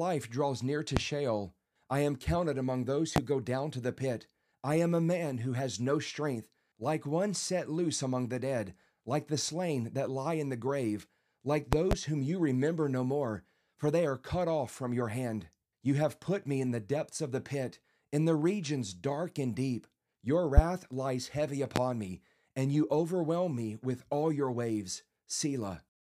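Loud pops hit at 0.97–1.00 s, 3.16–3.20 s, 11.73–11.95 s (two in quick succession), 20.57–20.61 s and 21.76–21.79 s, each roughly 25 dB above the speech. They are likely from an electrical pulse entering the chain. Unlike a dropout click, they leave the speech running unbroken underneath.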